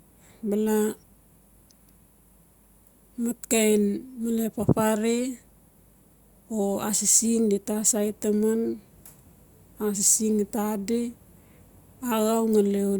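No technical faults can be heard anywhere in the speech.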